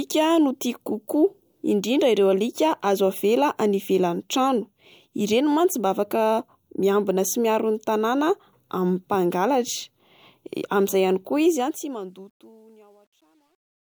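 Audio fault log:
11.46–13.95 s, truncation distortion on a fade. Undithered coarse steps, consistent with 10-bit level, make the fading speech gritty, worst from 12.36 s to the end.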